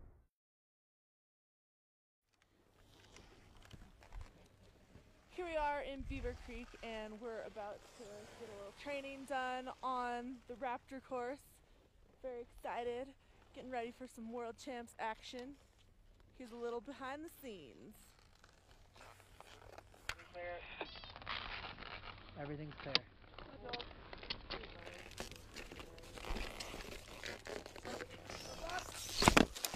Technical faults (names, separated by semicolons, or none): digital radio blending to analogue